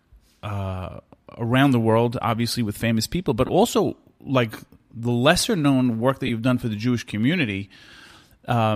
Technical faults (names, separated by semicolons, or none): lost LE Audio frames